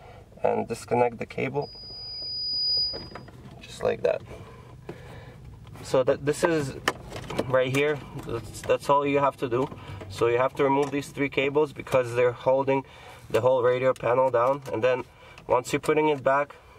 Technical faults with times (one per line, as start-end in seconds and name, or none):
1.61-3.29 loudspeaker feedback squeal